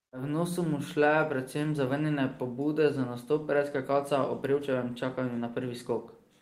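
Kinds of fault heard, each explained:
No technical faults can be heard in this clip of speech.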